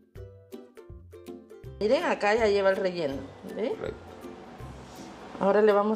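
Nothing stood out as a technical problem on listening to this audio.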